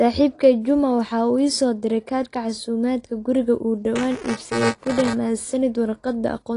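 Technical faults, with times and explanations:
Throughout, AAC compression: nothing is present above 10.6 kHz, and the plainly audible smearing and dullness likely come from AAC-LC coding at a low bitrate around 32 kbps, where the encoder lowers its cut-off and quantises the frequency lines coarsely against its hearing model.
3.95 to 5.13 s, buffer tearing: a robotic buzz at 345 Hz, which fits a 128-sample buffer. The writing program and the reading hardware cross inside each period, so around a tenth of every buffer replays audio from about 10 ms earlier, with hard joins.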